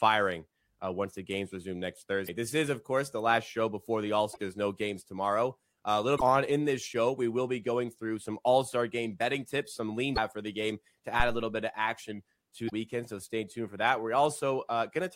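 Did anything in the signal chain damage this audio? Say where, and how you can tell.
Yes. The codec stage shows damaged data in a compressed stream: short glitches at 2.24, 4.30, 6.15, 10.12 and 12.66 s, each lasting well under a tenth of a second. Corrupted frames threw the decoder off, so it garbled them and resynced at the next header.

Back at the analogue input there's a phantom power thump at 11.20 s, a low thud that dies away in about 69 ms. That's a supply being switched on a live input, with the voltage step pushing through the coupling capacitors.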